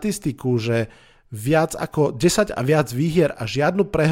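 A short speech recording with nothing technically wrong with it.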